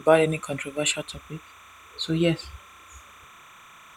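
From start to finish, the speech carries timecode bleed: linear timecode from an adjacent track or cable has leaked into the recording. The code's square wave flips between two pitches near 1 and 2 kHz, heard as a steady chirping warble sitting roughly 25 dB under the voice and ticking along at 30 frames per second. On a spectrogram it shows as two persistent horizontal bands near 1 and 2 kHz with faint odd harmonics above, while the waveform's quiet gaps never settle to silence.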